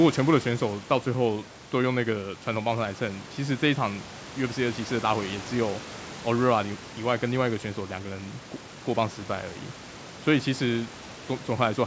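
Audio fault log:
The speech has no technical faults, with content ending near 8 kHz as expected from the call's microphone processing and wideband codec, and a room background about 19 dB below the speech.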